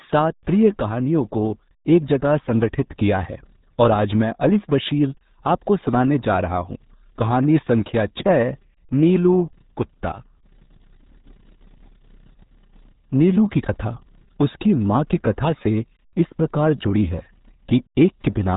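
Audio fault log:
throughout, RealAudio 14.4 codec: speech sounds muffled and gargly with nothing above 3.8 kHz, heavy damage that fits an 8 kbit/s dial-up-era speech codec.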